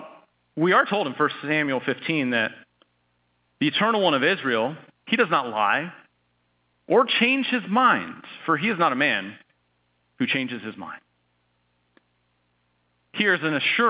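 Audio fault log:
Nothing stood out on listening to this speech clip, which carries the narrow band of A-law telephone coding.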